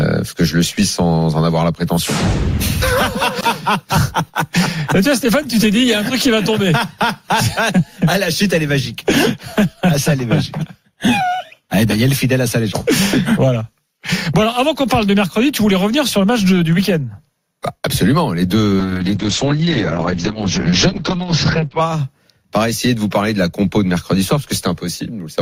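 At 18.81 s there's a call bitrate drop that lasts until about 21.87 s. The bandwidth estimate collapsed and the encoder had to code far more coarsely. The sound goes rough and watery, and the top end gets chopped from roughly 20 kHz down to 8 kHz, so it turns muffled too. That's consistent with the rate falling from something like 48 kbps to about 8 kbps. It sits at the bottom for around three seconds before recovering.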